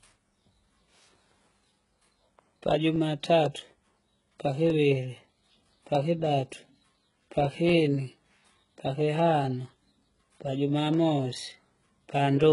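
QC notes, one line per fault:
throughout: HE-AAC compression. The treble sounds synthetic and gritty, with sibilants turning metallic or lispy, and nothing is present above 11.1 kHz. This is likely spectral band replication, where upper bands are copied from lower ones, and the heavy damage fits a very low bitrate of around 12 kbps.
0.22 to 12.44 s: periodic USB or driver dropouts. There are regular ticks every 0.249 s, about fifty in all, heard against the speech. Each marks a tiny skip of roughly half a millisecond, where a stalled bus or driver dropped samples and the waveform jumped across the gap.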